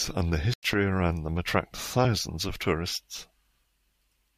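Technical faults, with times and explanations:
0.54–0.74 s, corrupt frame muted: the speech drops abruptly into a silent hole about 0.2 s long, with no fade at either edge. Damaged compressed frames were rejected by the decoder and the player filled their slot with silence, so the surrounding timing stays intact. The length fits roughly three consecutive frames being lost. On the waveform this is a flat line that starts and ends sharply. On a spectrogram it is a clean vertical blank band across all frequencies.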